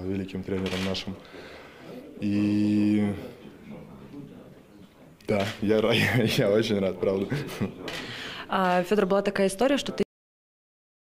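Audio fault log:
10.03 s, cut-off end: the sound stops mid-event and drops straight to digital silence with no decay, since the final buffers never got written or played.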